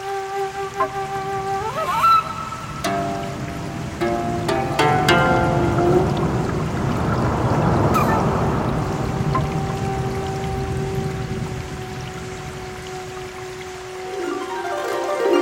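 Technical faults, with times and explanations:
Nothing stood out on listening to the clip.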